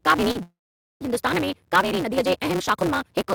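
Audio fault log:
throughout: block size mismatch (truncated). A steady buzz at 188 Hz sits under the speech for the whole clip. One stage hands over longer blocks than the next stage reads, and the tail of each block is discarded. The repeating cut at each block boundary makes the buzz. Because part of every block is lost, the speech runs about 1.88 times too fast, with its pitch close to normal. The buzz rate fits a 256-sample read.
0.31 to 0.37 s: short concealed packet loss. About 40 ms of speech did not arrive in time. The receiver covered the gap for about 33 ms by extending the last sound, then blended back into the real signal. The result is a brief smear or wobble in the speech.
0.43 to 1.02 s: long network dropout. The speech stops and is replaced by a continuation of the last sound, a buzz or hiss that fades out. After the fade, about 0.47 s of silence follows. The speech then resumes further on, and about 580 ms of it is never heard. 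The likely cause is a network gap long enough that the receiver's concealment ran out before audio arrived again.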